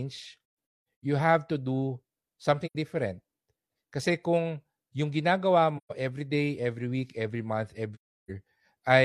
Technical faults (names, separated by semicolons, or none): AAC frame loss with muting